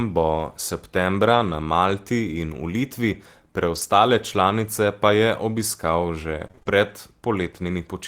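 Between 1.27 and 6.69 s the speech carries scattered short gaps, about five in all, none longer than roughly 30 ms. Lost or late packets left small holes, and the receiver filled each by extending the preceding sound, leaving brief ticks, smears and hiccups in otherwise continuous speech.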